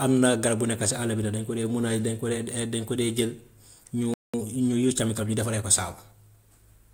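At 4.14 s the player most likely ran short of data or had its thread blocked, producing a playback stall: the speech cuts off mid-flow and the output goes silent for about 200 ms, until 4.34 s.

From 4.34 s to 5.66 s the player works off the backlog left by the stall through time-compressed catch-up, cutting out small slices of audio and cross-fading across the joins. The speech runs about 1.15 times faster than normal while keeping its pitch, so it sounds hurried rather than higher, until playback settles back to normal speed.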